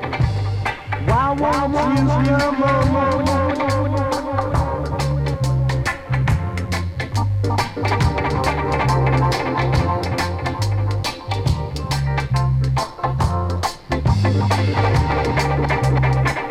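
A steady, raspy buzz runs underneath the whole clip, sitting well below the main sound, around 35 dB down. This is mains buzz: sharp switching spikes from the 50 Hz supply leaked into the signal path, spreading harmonics up into the kilohertz range.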